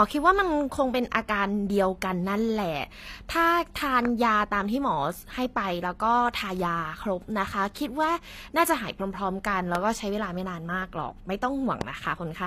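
From start to finish the speech carries plainly audible HE-AAC compression, most likely from a low-bitrate encode around 24 kbps. The treble above the coded band is rebuilt from copied lower bands, so s sounds come out gritty and metallic, their harmonics not lining up with the lower spectrum. A spectrogram shows smeared, blocky upper bands repeating lower patterns and nothing at all above 14.9 kHz.

A loud pop lands at 4.05–4.07 s, another at 9.75–9.77 s, and a third at 11.81–11.83 s. Each is a single sharp crack on top of the speech, which carries on underneath, and the likely cause is a brief voltage spike from a plug, switch or static discharge. The first and third peak about 15 dB above the speech and the middle one about 20 dB. On the waveform each is a tall, narrow spike, and on the spectrogram a thin vertical stripe spanning all frequencies up to 14.9 kHz.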